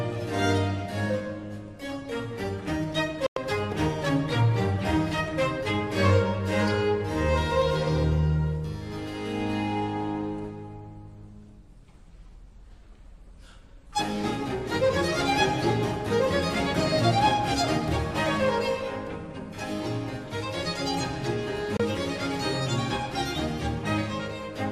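At 3.26 s and 21.77 s, digital broadcast dropouts: the receiver briefly lost valid frames and muted, leaving clean silent holes of about 0.1 s and 24 ms, not smeared or repeated sound.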